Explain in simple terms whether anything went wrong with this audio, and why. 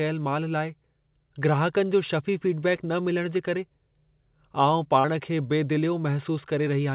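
Twice during this speech, short concealed packet loss occurred: a few hundredths of a second of the call arrived too late, so the receiver patched the gap by extending the sound just before it. It happens around 2.76 to 2.80 s, right before "न मिलण जे करे", and again around 5.00 to 5.06 s. Each spot is a brief smear or wobble, longer at 5 s, heard over the call's usual muffled phone quality.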